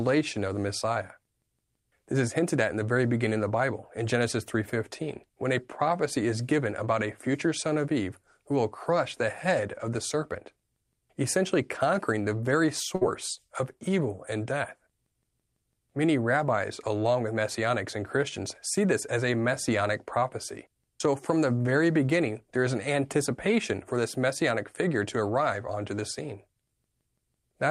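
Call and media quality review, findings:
Brief held sound, fading out, at 12.95–13.03 s, then speech jumps ahead. Burst of packet loss, network path: receiver concealment stretched the last sound for about 56 ms while roughly 60 ms of speech was lost.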